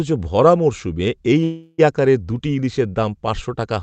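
At 1.43 to 1.80 s, a call audio freeze: a fading buzz fills roughly 0.35 s, then speech resumes intact and later, likely from delayed packets draining the jitter buffer.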